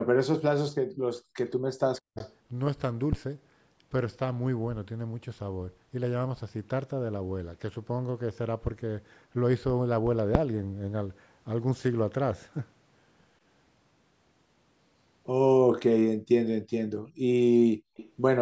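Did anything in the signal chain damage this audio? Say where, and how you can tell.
Yes. From 0.02 to 0.92 s and again from 1.62 to 2.19 s, the speech dips by roughly 40 dB in patches. This is likely speech suppressed in double talk: the call's echo canceller, in the call-processing stage, mistook the talker for loudspeaker echo while both sides spoke and attenuated everything.

The room tone drops out briefly from 1.20 to 1.34 s, by about 36 dB, and from 16.17 to 16.29 s, by about 33 dB. This is background gated by the echo canceller, which clamps the microphone hard while far-end audio plays and releases it a moment later.

A faint, delayed copy of the sound appears from 2.16 to 2.31 s and from 17.97 to 18.11 s, sitting some 20 to 25 dB below the speech and trailing it by 178 ms. The likely cause is echo leak: a speakerphone's canceller let residual loudspeaker pickup through, and it was sent back.

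Deep low thumps land at 3.13 to 3.25 s and 10.35 to 10.48 s, decaying in about 28 and 29 ms. These are phantom power thumps from the analogue wiring stage. A supply was switched on a live input, and the voltage step passed through the coupling capacitors.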